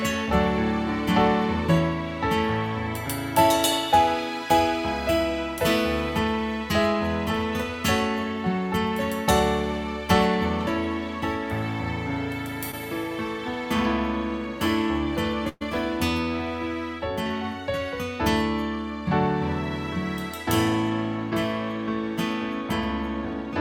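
At 12.71 to 12.75 s there is a short concealed packet loss. About 20 ms of audio failed to arrive in time, and the receiver patched roughly 14 ms of it by extending the preceding sound before crossfading back into the real signal. It comes across as a brief smear or wobble rather than a gap. Unlike a burst, nothing is held long enough to buzz or fade.

At 15.49 to 15.63 s a burst of packet loss removes about 120 ms. The concealment stretches the last sound across about 118 ms, turning it down as it goes, so it becomes a sustained buzz or thinning hiss rather than a brief blur. About 10 ms drops to silence before playback picks up further along, with that stretch of audio gone. The length of this held, decaying stand-in is what marks it as a burst rather than a single short loss.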